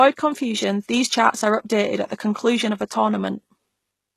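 The speech has plainly audible damage throughout: the upper range sounds synthetic and metallic, s sounds come out gritty and lispy, and nothing at all remains above about 12.3 kHz. The likely cause is HE-AAC compression at a very low bitrate, on the order of 16 kbps. Only the lower spectrum is truly coded, and the treble is rebuilt from copied lower bands, so its harmonics no longer line up with the real ones.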